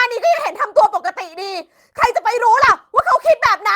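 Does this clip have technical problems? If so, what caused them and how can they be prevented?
Yes. At 0.77 to 0.79 s, and again across 2.49 to 2.79 s, the speech turns briefly rough and noisy without dropping out. This is a lost packet rebuilt from error correction: the decoder filled the gaps, 20 ms and then 160 ms, with low-bitrate copies carried in the following packets. Improving network reliability, for example with a wired connection or less congestion, would prevent it.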